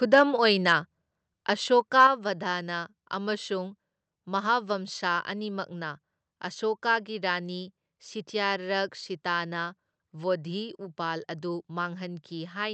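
An input gain likely set too high drives the microphone into overload from 0.13 to 0.22 s, pushing peaks about 3 dB past the converter's limit. The flattened tops give the speech a harsh, crackly edge. At 1.02 s the software likely lowers the input in a microphone volume step-down, so speech and background drop about 2 dB at once. From 1.99 to 2.06 s overload likely returns, about 2 dB over, and a small share of samples clip into a gritty crackle. At 2.07 s, right after that distorted peak, another step-down, likely from the software, cuts the level by about 5 dB.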